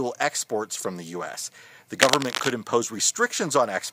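Cable scratch noise runs from 1.99 to 2.51 s. Dense, uneven crackling rustles over the audio, roughly as loud as the sound itself. A worn connector being moved is the likely cause.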